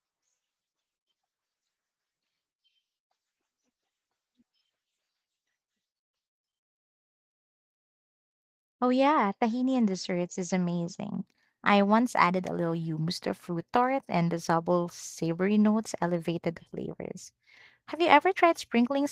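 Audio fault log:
0.67–0.69 s, skip ahead: about a second of speech is dropped and playback jumps straight forward, joining both sides almost seamlessly with no gap filled.
0.72–2.42 s, jitter buffer speed-up: the overfilled buffer trims short pitch-period pieces repeatedly, running speech about 23% fast at unchanged pitch and losing roughly 0.4 s.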